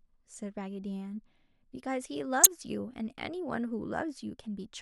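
At 2.43 to 2.47 s, damaged data in a compressed stream causes a brief glitch as the decoder misreads corrupted frames and resynchronises at the next header.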